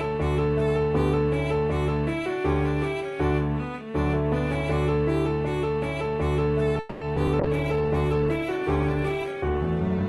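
The audio stalls from 6.79 to 7.03 s in a call audio freeze: the last sound is drawn out as a fading buzz or hiss for about 220 ms, then resumes exactly where it stopped, with nothing skipped, just pushed later. That is likely a jitter buffer running dry while packets were held up in transit. Unlike that pause, the two short concealed packet loss events at 7.15–7.18 and 7.26–7.29 s are brief smears about 30 ms long where real audio is genuinely lost and patched over by extending the preceding sound before blending back in. From 7.41 s to the end a call bitrate drop makes the sound coarse, watery and dull at the top, consistent with the encoder falling from around 48 to 13 kbps. It is a lasting change in texture, not a momentary glitch.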